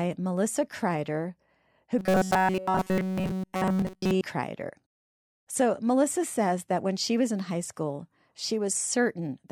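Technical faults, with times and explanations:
1.99–4.21 s: robotic sound from repeated short buffers. Across this span the speech collapses into a rigid, metallic buzz fixed at 188 Hz. Essentially the whole stretch is affected, though the rough shape of the syllables still comes through. The likely cause is audio arriving too seldom, so playback keeps looping the most recent fragment of about 5.3 ms while fresh material is skipped. Repeating a fixed length imposes a steady pitch at its reciprocal.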